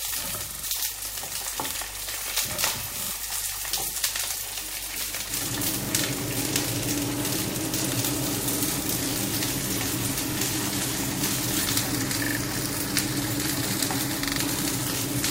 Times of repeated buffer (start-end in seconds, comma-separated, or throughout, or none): 0.51-0.64, 3.03-3.11, 4.48-4.52, 5.85-5.89, 8.53-8.58, 10.33-10.37, 12.25-12.37, 14.25-14.38